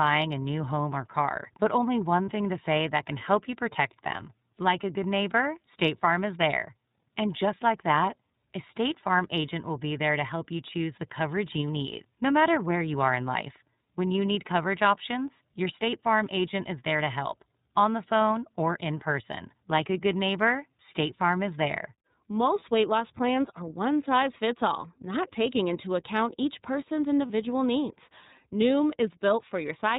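Throughout, the audio carries plainly audible iLBC codec damage. Nothing sounds above 4 kHz, and the speech has a rough, slightly synthetic edge. Unlike a simple band-limit, this roughness fits the 13.33 kbps, 30 ms frame mode, which codes each frame's excitation independently.

At 2.25, 22.59 and 27.27 s come lost iLBC frames, each gap about 30 ms, which points to one missing frame. The decoder repeats the last pitch cycle mixed with noise, giving a brief held, buzzy vowel rather than silence or a click. Because each frame stands alone, the voice is right again almost at once afterwards.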